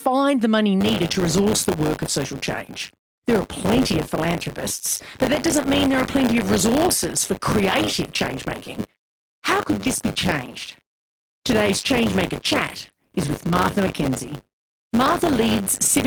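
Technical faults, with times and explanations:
0.8 to 16.06 s, buffer tearing: a constant robotic rattle at 100 Hz rides on the speech. The buffer's writer and reader have slipped, so roughly 15 percent of each 10 ms period replays audio from about 30 ms earlier, with hard joins either side.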